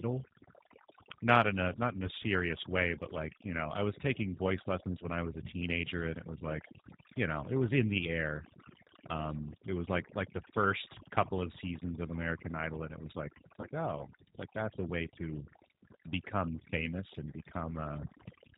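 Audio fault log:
Throughout: overdone noise removal. The background has been pushed down, with small twinkling specks where isolated frequency bands flicker on and off. The reducer was set too aggressively, so any band close to its noise estimate was cut hard or removed, and the quieter parts of the speech were removed along with the noise. The voice has its softer detail carved away in patches.
Throughout: G.729 codec damage, plainly audible. The speech is band-limited, with nothing above 4 kHz, and has the slightly rough, synthetic texture of a low-rate codec that rebuilds each 10 ms frame from a vocal tract filter, a pitch predictor and a few pulses. The sound fits G.729A at 8 kbit/s. The twinkling residue left by the noise removal warbles further as it passes through this model, which was designed for clean speech.
4.99–5.05 s and 13.61–13.67 s: VoIP packet loss concealed by the speech codec. 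The first gap falls between "I was taking voice" and "I was a teenager", and the second falls between "it was like it's" and "oh it's like that's". Each gap fits a single lost 20 ms packet. The decoder filled the hole by extending its last pitch and filter settings at falling gain, which produces a brief smear that fades. Because each frame depends on the one before, the voice stays weak or distorted for a while after audio resumes, so each disturbance lasts about 66 ms.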